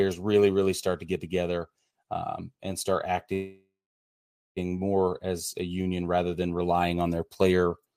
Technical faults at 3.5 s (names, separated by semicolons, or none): call audio freeze